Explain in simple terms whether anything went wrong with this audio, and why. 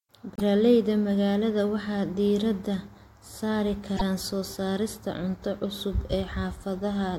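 A broken MP3 bit reservoir is the likely cause of two brief glitches in this speech, at 0.35 to 0.41 s and at 3.96 to 4.02 s, the second falling between "diiradda saari" and "soo saarista". Each lasts about two 26 ms frames and the sound skips ahead. MP3 frames store some of their data in earlier frames. When frames go missing, the next one reaches back for that data, finds the wrong bytes, and briefly decodes garbage.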